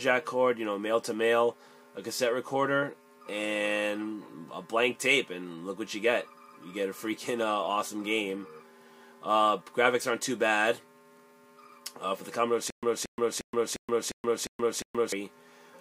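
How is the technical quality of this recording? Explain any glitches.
The recording has one clear glitch near the end. From 12.70 to 15.12 s there is a stutter with silent gaps: a 228 ms fragment repeats seven times, each followed by about 125 ms of dead silence, giving an even 353 ms cycle. This is likely a stalled stream replaying its last buffered chunk on each retry, and the real audio for that stretch is lost. Unlike a plain dropout, the same burst keeps returning, and the true digital silence between bursts separates it from a seamless loop.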